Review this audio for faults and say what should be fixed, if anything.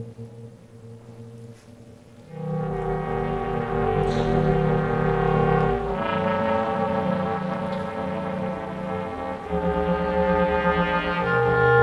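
Overlap-add ripple runs throughout. The frames were rejoined with windows that do not sum to a constant gain, so the level drops by about 60 dB once per frame, around 300 times a second, producing a harsh robotic buzz. The waveform envelope shows evenly spaced deep notches, and the spectrogram shows fine, regular vertical striping. To prevent it, pick a window shape and hop size whose overlapped windows sum to a constant before resynthesis.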